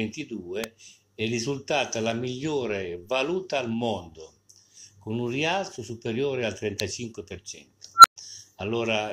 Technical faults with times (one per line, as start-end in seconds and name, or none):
0.64 electrical switching spike
6.80 electrical switching spike
7.96-8.16 unstable filter